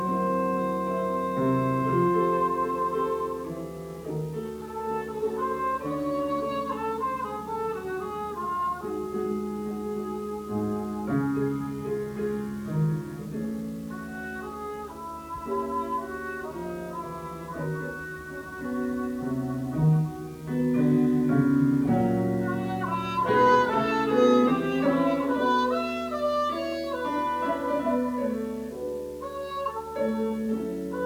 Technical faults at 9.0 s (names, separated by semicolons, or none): video or display buzz